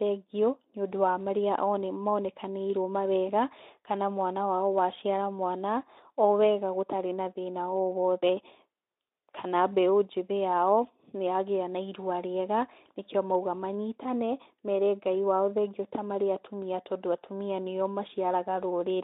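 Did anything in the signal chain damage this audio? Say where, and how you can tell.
No, nothing damaged this audio.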